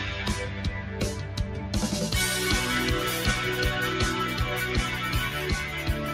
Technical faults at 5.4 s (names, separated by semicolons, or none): noise suppressor applied to music or sounds